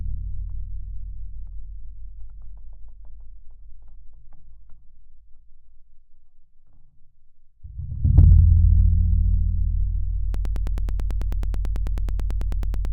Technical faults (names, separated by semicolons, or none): broken-record loop